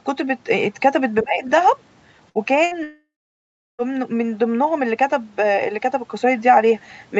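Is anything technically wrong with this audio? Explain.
Yes, there are three kinds of fault in this speech.

From 1.22 to 1.44 s, the speech is suppressed in double talk. The echo canceller was likely faced with both ends talking at once, could not tell the near talker from the returning loudspeaker echo, and pulled the whole signal down. The speech sinks by about 20 dB for roughly a fifth of a second, ducking before recovering.

Two bursts of packet loss follow, at 2.29 to 2.38 s and 2.65 to 2.74 s. Each time about 60 ms of consecutive packets failed to arrive in time, so the receiver stretched the last decoded sound across the hole for about 60 ms, fading it as it went. Each burst is a brief smeared buzz or hiss, then the speech jumps ahead with that stretch gone.

Just after, from 2.83 to 3.82 s, there is a long network dropout, likely caused by the stream stalling entirely for close to a second. 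The receiver first carries the last sound forward as a decaying buzz or hiss, then gives up, leaving about 0.7 s of silence. Speech resumes at 3.82 s with roughly 960 ms simply missing. The sound at every point stays within the call's 8 kHz bandwidth.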